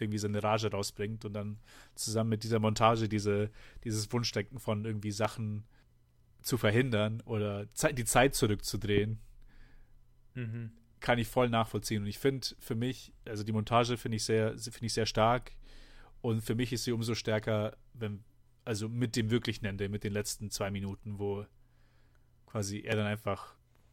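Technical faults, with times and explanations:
5.25–5.27 s, 8.98–9.00 s and 22.92–22.95 s, loud pop: single sharp pops jump well above the speech, around 15 dB louder for the first two and about 10 dB for the last, likely from a voltage spike. Each appears as a full-height vertical stripe on the spectrogram and a narrow spike on the waveform.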